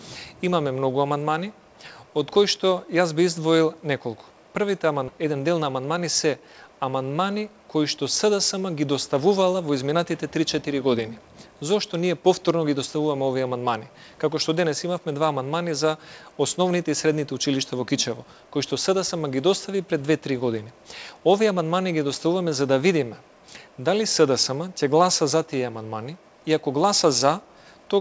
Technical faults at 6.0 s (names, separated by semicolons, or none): jitter buffer speed-up